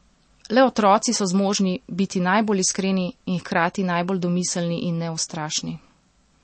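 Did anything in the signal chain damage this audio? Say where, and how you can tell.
Yes. Throughout the speech the sound is watery and swirly, with sibilants smeared and nothing above 8.4 kHz. That points to the codec stage, likely MP3 compression at a starved bitrate around 32 kbps: the encoder cut the treble and dropped weak frequency lines frame by frame.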